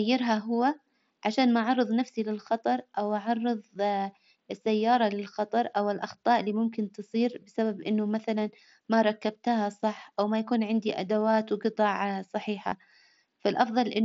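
A brief buzzy, held tone replaces the audio from 12.69 to 12.72 s, just after "يكون عندي أدوات وجطع", with a slight warble as speech resumes. This is concealed Bluetooth headset packet loss: about 22.5 ms of mSBC headset audio went missing, consistent with a short run of frames, and the receiver filled the gap by repeating the closest-matching recent waveform.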